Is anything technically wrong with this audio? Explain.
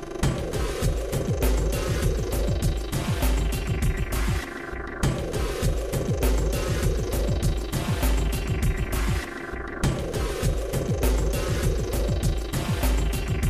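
Yes. From 7.25 to 10.05 s, a train of clicks ticks over the sound at about 13.9 per second, unevenly spaced, some forty in all and peaking about as loud as the sound itself. Repeated, similar pulses like these likely come from electrical interference or a faulty connection or power supply.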